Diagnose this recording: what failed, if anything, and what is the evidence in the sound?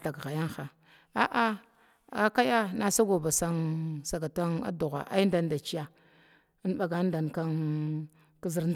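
Nothing in the signal chain failed: the speech holds together from the wiring and converters through buffering, format handling and playback, with no dropouts, clicks, clipping or timing disturbances to mark a fault at any stage.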